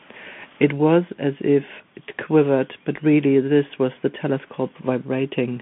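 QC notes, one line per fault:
Throughout, Bluetooth CVSD headset codec: the speech is squeezed into a narrow phone-style band of about 150 Hz to 3.4 kHz, with nothing above 3.8 kHz, so it sounds thin and boxed-in. The codec damage is plainly audible. The one-bit up/down coder's adaptive step can't keep up with fast, loud high content, so s sounds come out scratchy and a grainy hiss sits under the speech, consistent with a 64 kbps CVSD headset link.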